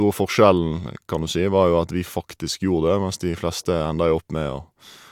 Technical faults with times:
none

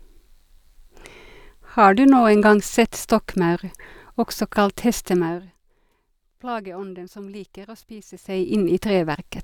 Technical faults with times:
none

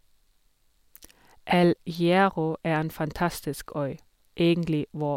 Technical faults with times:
none

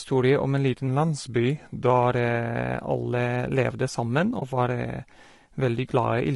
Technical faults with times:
0.00-6.35 low-delay AAC compression
0.87-1.90 drift correction step
4.39-4.43 AAC frame loss with muting

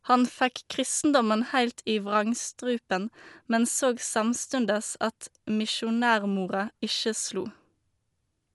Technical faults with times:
0.00-8.54 Dolby Digital compression

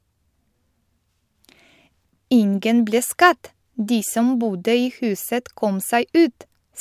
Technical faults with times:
none

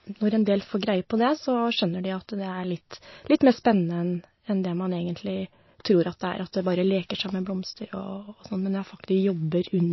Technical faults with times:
0.00-9.93 MP3 compression

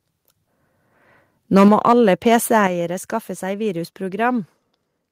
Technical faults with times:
1.56-1.93 microphone overload
1.68 microphone volume stepped down
2.67 microphone volume stepped down

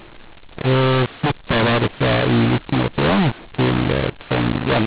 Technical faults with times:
0.00-4.86 mu-law and A-law mixed up

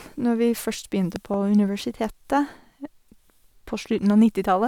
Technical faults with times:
1.16-1.36 loud pop

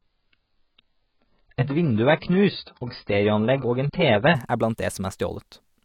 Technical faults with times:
0.00-4.35 adaptive stream starting at a low bitrate

